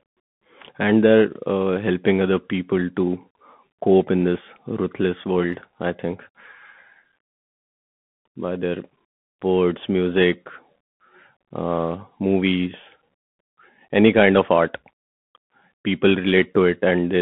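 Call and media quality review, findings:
Throughout: Bluetooth CVSD headset codec. Band 150 Hz–3.5 kHz, scratchy s sounds, granular hiss under speech; band-limiting alone would sound clean, this one-bit step coder doesn't.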